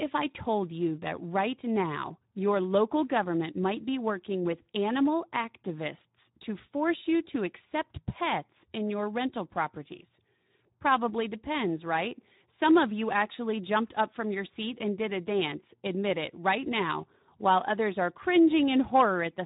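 From start to finish the speech carries the Speex codec's mark, and the damage is plainly audible. The voice sounds hoarse, with a grainy, noise-laden texture, because this CELP coder has too few bits to model the excitation faithfully. The level of damage fits a rate near 11 kbps. Nothing survives above about 3.8 kHz. Unlike a simple low-pass filter, the remaining band itself is roughened rather than merely dulled.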